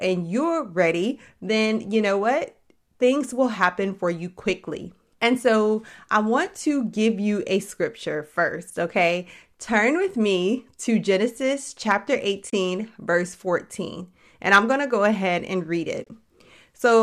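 Speech, carried over what sounds like low-delay AAC (AAC-ELD likely), shows AAC frame loss with muting twice: about 30 ms dropped at 12.50–12.52 s, then several short gaps scattered over 16.04–16.12 s, the longest roughly 30 ms, right after "go ahead and read". The decoder zeroes missing frames, so the overlapping windows fade sound out and back in. On a waveform these appear as smooth-tapered dips to silence. A spectrogram shows full-band vertical blank strips roughly one to three 10 ms frames wide.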